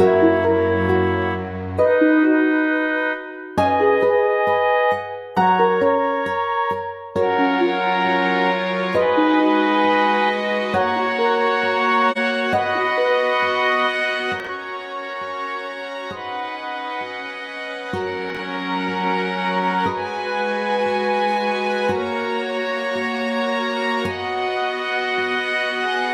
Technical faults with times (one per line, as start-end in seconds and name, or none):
12.11-12.18 corrupt frame decoded
14.39-14.50 corrupt frame concealed
18.30-18.38 corrupt frame concealed